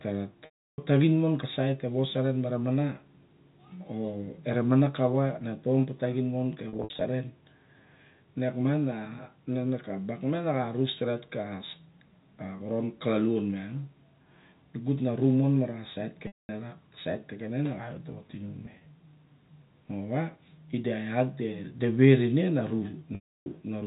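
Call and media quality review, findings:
Packet loss with pitch repetition at 0.45–0.78 s (330 ms lost), 6.69–7.01 s after "ka taxin mo ka" (210 ms scattered over 320 ms, longest run 60 ms), 16.27–16.49 s (220 ms), 18.66–18.86 s (70 ms over 200 ms, runs up to 30 ms) and 23.15–23.46 s (310 ms). Jitter buffer/PLC: the last pitch period is looped, so short gaps sound buzzy and held, and long ones fade to silence before a cross-fade back. The gap sizes fit 10 ms packets. The narrowband G.711 path can be heard carrying the sound.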